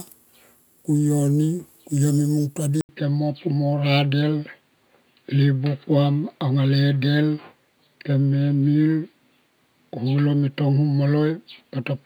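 A speech clip that turns dull and boxy at 2.81 s and stays that way to the end, after a silence of 80 ms. This is most likely the input switched to a poorer device, one that passes nothing above 4.7 kHz and brings its own faint background noise, around 55 dB below the speech, while loudness stays about the same. On a spectrogram the upper band goes empty at 2.81 s behind a thin vertical gap, and the waveform shows a brief flat line there with no jump in level.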